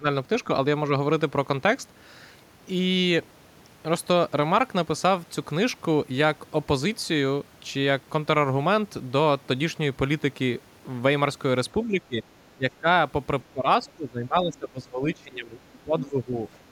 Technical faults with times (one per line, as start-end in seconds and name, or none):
0.00-0.05 speech suppressed in double talk
11.85-12.20 speech suppressed in double talk
12.57-12.88 speech suppressed in double talk
13.52-16.46 speech suppressed in double talk